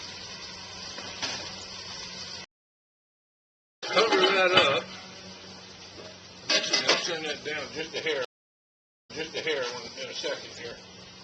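Two stream reconnects occur. At 2.44 s the connection drops and the player goes silent for 1.34 s, then rejoins with a fresh decoder at 3.84 s. The audio picks up about a second and a half further on, so that stretch is skipped. At 8.25 s it breaks again: 0.81 s of silence, and on resuming at 9.65 s the server resends a burst, so the sound jumps back 0.6 s and repeats material just heard.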